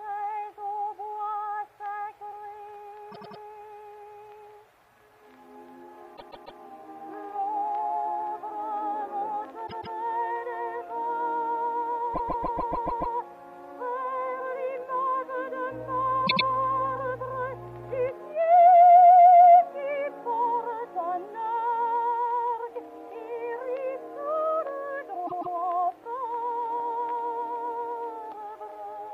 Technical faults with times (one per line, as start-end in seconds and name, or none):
3.11-3.40 repeated frames
6.16-6.59 repeated frames
9.66-9.95 repeated frames
12.13-13.14 repeated frames
15.70-18.12 mains hum
16.26-16.45 repeated frames
25.26-25.55 repeated frames